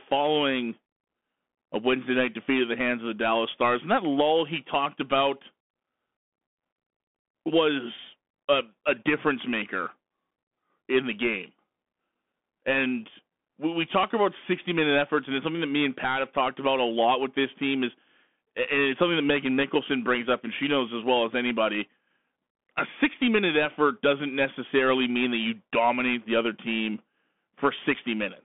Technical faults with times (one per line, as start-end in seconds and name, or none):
0.00-28.44 Bluetooth CVSD headset codec